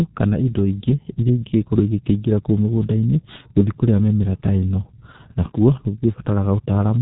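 Throughout, the speech is muffled and hoarse with smeared consonants and nothing above 3.8 kHz, pointing to heavy G.723.1 codec coding near 6 kbit/s.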